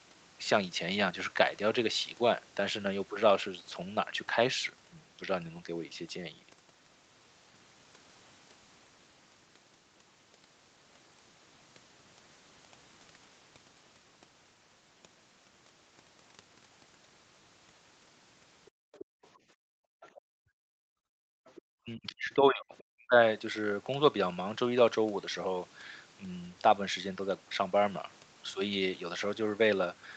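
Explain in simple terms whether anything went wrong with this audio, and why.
Three kinds of problem can be heard, all between about 18.6 and 23.2 seconds.

Other side's voice leaking through: a second, quieter voice sits well below the main speech at 18.65 to 19.27, 20.01 to 20.21, 21.46 to 21.62 and 22.78 to 22.83 seconds. The likely cause is the far caller's voice coming from this talker's loudspeaker and not being fully removed.

Background gated by the echo canceller: from 18.71 to 21.46 seconds, the room sound drops away almost completely, for about two seconds in total. The canceller was trying to block the loudspeaker sound and turned the microphone right down. The background comes back when it lets go.

Speech suppressed in double talk: between 21.82 and 23.16 seconds, the main speech itself dips sharply, for about a second in total. This is likely because both sides talked at once. 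The canceller could not tell its own talker from the loudspeaker echo, so it turned both down.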